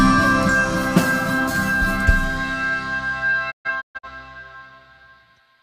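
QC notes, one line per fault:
3.50–4.08 s: digital broadcast dropout; the receiver mutes failed frames, leaving several short holes with 20 ms fades, totalling about 0.3 s, longest 128 ms.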